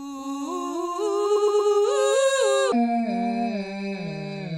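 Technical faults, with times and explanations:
Throughout, doubled audio track: the music is shadowed by a second, equally loud copy about a third of a second behind, with no decay or room colour. This is likely the same signal captured twice, once through a slower path, so both copies play together.
1.35 to 1.70 s, repeated frames: a 116.1 ms slice of music stutters, playing three extra times. A run of compressed frames was sent or written more than once, so the decoder replayed it, adding 348.3 ms.
2.72 s to the end, section at the wrong speed: the music abruptly turns deep and sluggish, running at 0.589 times normal speed and sounding about ten semitones lower. This is likely playback against the wrong clock, so pitch and tempo fall together.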